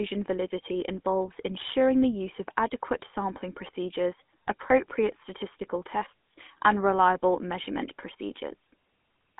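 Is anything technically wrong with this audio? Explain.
Yes. Throughout, the speech carries GSM full-rate codec damage. It fits a 13 kbps phone codec, band-limited to roughly 200 Hz to 3.5 kHz, and sounds buzzy and gravelly.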